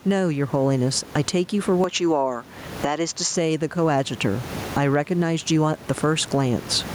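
Right from the start there's gain pumping running through the whole clip. The level gets yanked down each time the speech gets loud, swinging by roughly 20 dB. That breathing pattern is likely the gain set far too hot with a fast limiter clamping it back. It squashes loud and soft passages together, and the room noise sits about 30 dB under the speech.

From 1.84 s to 3.36 s the tone changes. It turns duller and boxier, with nothing above 7.6 kHz, then opens back up. That's likely the input switched to a poorer device for that stretch, maybe a second mic or a headset's call profile. There's no dropout at either switch and the overall level barely shifts. The new device adds its own faint noise floor, sitting far below the speech.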